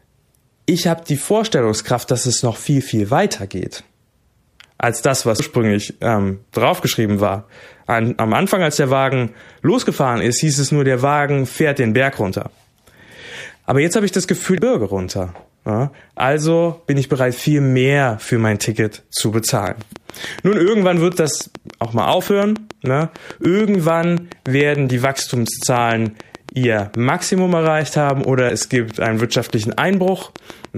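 At 5.39 to 5.42 s the speech is hit by a burst of damaged data in the compressed stream. Corrupted bytes left the decoder unable to read those frames, so it lost sync and skipped forward to the next valid frame header. The same fault returns briefly at 14.58 s and, later, at 28.50 s.

From 19.67 s to 30.66 s a train of clicks runs through the speech: regular ticks at about 6.9 per second, around seventy in all, peaking roughly 10 dB above the speech level. Their similar shape and steady spacing are audible through the pauses as well as over the talking. The cause is likely electrical interference from nearby equipment or a faulty connection or power supply injecting a repeated pulse into the signal path.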